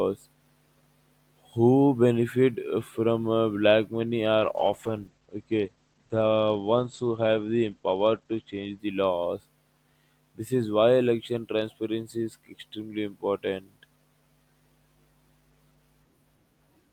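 From 4.41 to 8.85 s, a call bitrate drop makes the speech coarse and muffled above about 8 kHz, consistent with 12 kbps. Unlike packet loss, there are no gaps.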